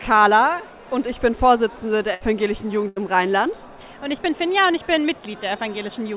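Two bursts of packet loss, at 2.14 to 2.22 s and 2.88 to 2.98 s, interrupt this call audio, which has nothing above 4 kHz, consistent with a G.711 narrowband call. Each time the receiver extends the last sound as a fading buzz or hiss, for about 64 ms and then 77 ms, and playback resumes with roughly 60 ms and 80 ms of audio missing.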